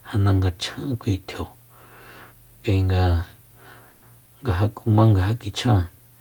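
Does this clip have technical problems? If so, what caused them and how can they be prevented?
Yes. At 3.89 to 4.04 s there is a call audio freeze. The last sound stretches into a fading buzz or hiss for 130 ms. The likely cause is delayed packets emptying the jitter buffer, which then adds that delay. A steadier network path or larger jitter buffer prevents this.

Short concealed packet loss follows at 4.20 to 4.23 s and 4.25 to 4.29 s. Lost audio was patched by extending the previous sound, giving brief smears. Forward error correction or less congested links reduce this.

A call bitrate drop starts at 4.66 s and lasts to the end. The rate falls from 64 to 28 kbps, so the sound turns coarser. More reliable bandwidth, or a higher minimum bitrate, prevents it.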